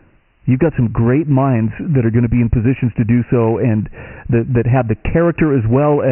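From start to finish the speech carries Dialogic VOX ADPCM damage. Nothing sounds above 3 kHz, which fits 6,000 samples a second at 4 bits, about 24 kbps. The coarse step-size coding is heavy here, leaving a gritty hiss that tracks the speech.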